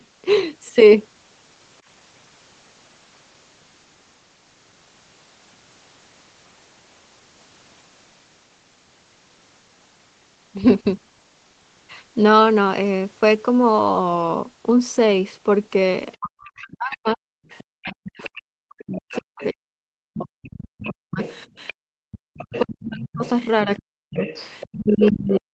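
From 16.12 to 17.61 s a second voice can be heard faintly behind the talker, about 20 dB down: the other side's voice leaking through, likely loudspeaker echo the canceller missed. Unlike crosstalk, it is that far-end voice coming back. It returns at 18.24 to 18.29 s, 18.96 to 19.46 s, 20.2 to 21.73 s (louder, about 15 dB down) and 22.34 to 25.36 s. From 16.18 s to the end, the talker's own speech is suppressed in double talk: it dips and cuts out, at its deepest by around 40 dB, likely because the canceller turned everything down while both sides spoke. It differs from a plain dropout because the gaps follow the far-end voice.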